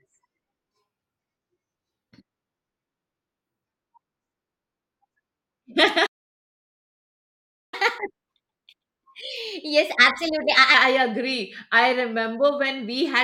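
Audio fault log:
6.06–7.74 s, playback stall: the speech cuts to silence for about 1.7 s mid-flow, then resumes, likely because the player ran out of buffered data.
7.74–10.74 s, catch-up at higher speed: the speech runs 1.15 times fast and about two semitones sharp as the backlog is resampled, then returns to normal speed.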